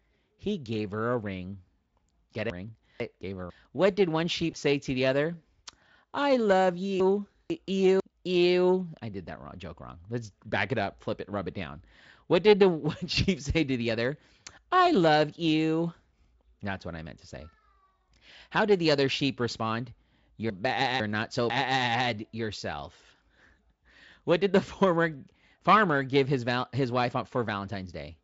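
Between 2.5 and 3.5 s the speech is briefly jumbled: two 500 ms chunks of audio play in the wrong order, the later one first and the delayed one after it, which points to chunks out of order. Nothing is missing, but the swapped order leaves three hard joins around a scrambled second of speech. The same one-chunk swap recurs from 7.0 to 8.0 s and from 20.5 to 21.5 s, each time with the same garbled effect.

At 4.51 to 4.56 s there is VoIP packet loss concealed by the speech codec. About 20 ms of audio, which fits one lost frame, was never received, and the decoder filled the gap by extending the last pitch and spectral shape at falling gain. The result is a short buzzy, smeared patch. Because the decoder's state had drifted, the voice stays weak and distorted for a few tens of milliseconds after real data resumes, up to about 4.56 s.

From 12.91 to 13.17 s there is a sudden gain jump. The level drops abruptly by about 6 dB, taking the speech and the background noise down together. 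This is likely a digital gain setting applied without a ramp. The Speex coding, at a rate that suggests 34 kbps, adds no more than faint artefacts.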